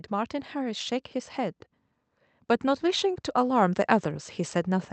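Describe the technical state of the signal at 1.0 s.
At 1.0 s the speech and its background are finishing a slow swell that began around 0.08 s and ends at about 1.02 s, rising by about 4 dB in total. This is automatic gain rising: the gain control judged the incoming level too low and raised its gain gradually over that second, lifting voice and room together. The call-codec path is audible as a top end that stops near 8 kHz, consistent with Opus at a wideband setting.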